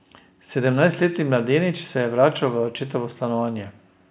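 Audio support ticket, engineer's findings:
No audible faults found in this speech recording.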